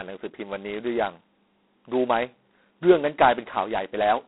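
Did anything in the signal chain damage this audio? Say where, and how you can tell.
Yes, at the codec stage: G.726 ADPCM. The harsh, rasping hiss points to 16 kbit/s, where two-bit prediction errors leave noise that follows the speech level throughout. A spectrogram would show a 200 Hz to 3.4 kHz band, blank above 3.9 kHz, with noise filling it under loud syllables.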